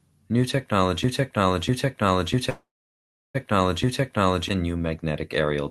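From 1.04 to 4.49 s there's a broken-record loop: a 0.65 s chunk repeats four times back to back, likely a stalled stream, so that stretch of speech is lost. Inside it, at 2.49 s, a call audio freeze, likely from a jitter buffer running dry, holds about 0.85 s before the speech resumes at 3.37 s. The sustained tone fades into roughly 0.7 s of silence, with nothing missing.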